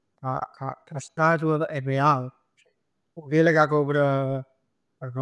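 No technical faults can be heard anywhere in the speech. At no moment does the audio show a problem worth noting.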